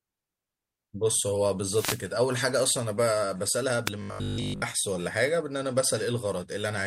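Wireless microphone noise hits at 1.63 to 2.11 s and 3.86 to 3.90 s: the analogue FM radio link fades as reflected signals cancel, and receiver noise rises through the speech. It is heard as a swish of static, the first longer, the second a brief burst.

Robotic sound from repeated short buffers, 4.02 to 4.64 s: the speech becomes a rigid, metallic buzz at 50 Hz that loosely tracks the words. This likely comes from audio arriving too seldom, with the last 20 ms looped to fill gaps so most of the real audio is lost.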